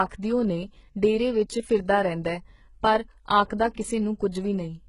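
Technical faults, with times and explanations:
Throughout: HE-AAC compression. The speech has heavy codec damage, and nothing sounds above 11 kHz. The treble still seems present, but it has a synthetic, gritty edge. The s sounds come out metallic and lispy. The likely cause is HE-AAC at a very low bitrate, which fits roughly 12 kbps. Only the lower band is truly coded. The upper band is rebuilt by copying lower bands upward under a coarse envelope, so its harmonics do not line up with the real ones.
3.74 to 3.77 s and 4.32 to 4.34 s: pre-echo. A short hiss comes before each of two sharp attacks. It lasts about 32 ms before the first and about 25 ms before the second. The attacks sound softened and smeared. The codec spreads its quantisation noise evenly across a whole block. Noise sized for the loud onset also fills the quiet moment before it. That moment is briefly hissy, and the onset loses its crispness.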